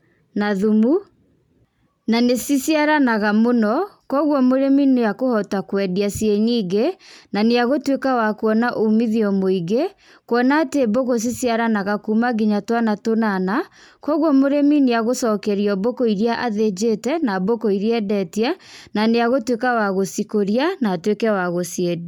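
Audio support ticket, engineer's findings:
No faults found on playback.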